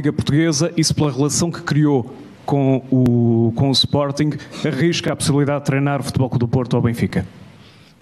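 Overlapping chunks cause a brief stutter at 1.04–1.06, 3.06–3.08, 5.08–5.10 and 7.10–7.12 s. Each 2-second chunk restarts 20 ms early, so that sound plays twice.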